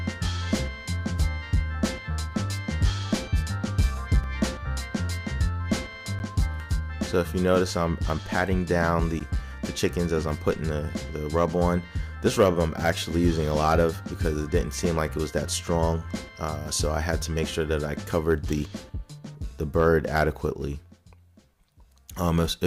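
At 4.24 s, 6.19 s and 9.20 s the audio drops into a block of digital silence, lasting 5 ms, 10 ms and 10 ms respectively. Each time the output was left filled with zeros, cutting abruptly to nothing and back with no fade, so each gap is heard as a sharp tick. On a waveform each appears as a near-flat line between hard edges. A spectrogram shows a thin vertical blank stripe.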